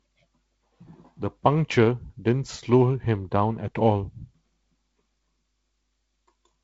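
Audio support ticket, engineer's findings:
Nothing stood out on listening to this speech clip; the G.722 wideband telephone coding carries the audio up to about 7.7 kHz, with the light upper-band hiss expected at 48 kbit/s.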